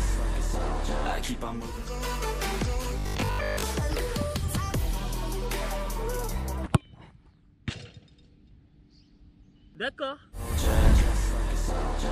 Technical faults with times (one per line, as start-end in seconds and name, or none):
2.99-3.67 robotic sound from repeated short buffers